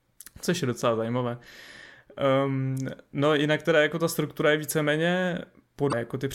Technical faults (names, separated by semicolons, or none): damaged data in a compressed stream